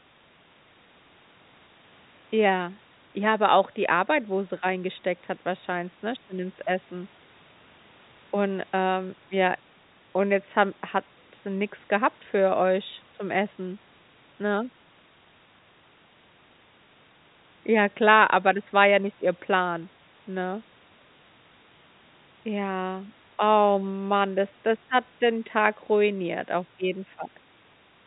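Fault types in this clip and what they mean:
No faults detected; the speech sits within a narrow telephone band consistent with G.711 coding, which is normal for this path.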